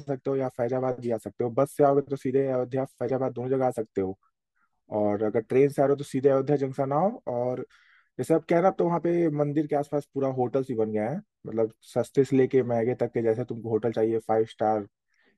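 No technical faults can be heard anywhere in the speech.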